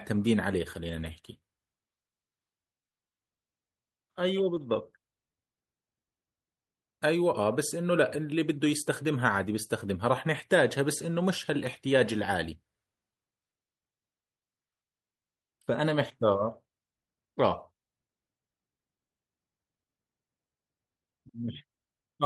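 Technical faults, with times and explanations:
0.83–1.09 s and 4.55–4.57 s, lost packet rebuilt from error correction: low-bitrate backup copies fill both dropouts, so the waveform shows no gap. On a spectrogram, harmonics blur briefly into grainy, noisier texture.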